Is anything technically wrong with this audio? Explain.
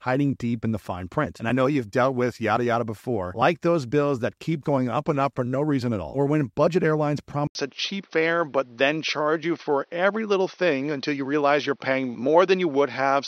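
Yes. From 7.47 s to the end there is an input switched to a poorer device, and a change of input is the likely cause. After an 80 ms gap the speech comes back through a narrower path with nothing above 6.3 kHz, so it sounds duller and boxier. A new, faint background noise, roughly 45 dB under the speech, appears with it. The level stays about the same, so the change is in tone and band, not loudness.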